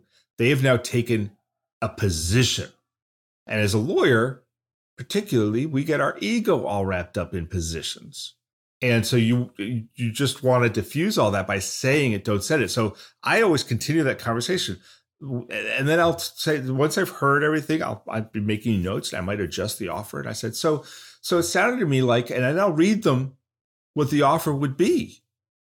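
Nothing in this speech recording stood out as a technical problem on listening.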